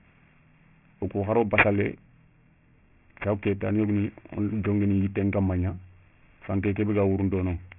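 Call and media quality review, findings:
Sibilants gritty and metallic throughout, spectrum running hard to a band edge near 3 kHz. Aliasing: resampled down to a 6 kHz rate without an anti-alias filter, content above 3 kHz folding back as unrelated tones, roughly 10 dB below the speech.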